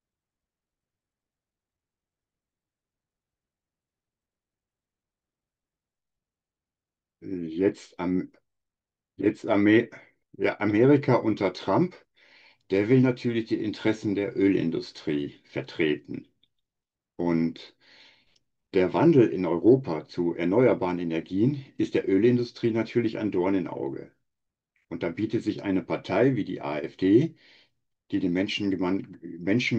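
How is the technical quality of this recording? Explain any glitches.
No technical faults are audible.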